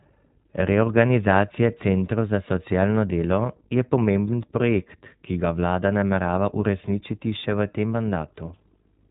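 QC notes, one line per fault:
throughout, iLBC codec: the speech is band-limited with nothing above 4 kHz, and it has a plainly rough, slightly synthetic edge. Each 20 ms frame's excitation is coded on its own, which fits the 15.2 kbps mode, so the texture gets grainy.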